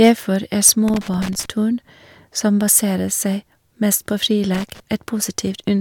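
Speech clip with two short bursts of hard clipping, from 0.02 to 0.10 s and 0.65 to 0.71 s, where peaks are pushed about 3 dB and about 5 dB past the limit and get sliced flat, giving that brittle crackle. Then there's loose connector crackle, irregular scratchy bursts from 0.88 to 1.46 s and 4.54 to 4.80 s, as a bad contact chops the signal in and out.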